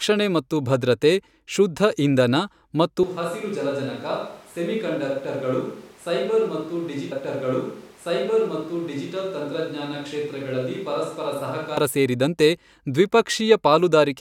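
A speech clip in which, right after "ಇಂಧನ ಮತ್ತು" at 3.03 s, the voice abruptly turns hollow, roomy and thin in the bass, drops by about 10 dB, and sits over room noise only about 25 dB down, until it snaps back close at 11.77 s. This is likely a switch to a distant microphone after the close one dropped out. Within that stretch, from 7.11 s to 9.10 s, about 2.0 s of audio plays a second time after a small blip at the jump back: a stream segment repeated, where the player fetched or queued the same chunk twice.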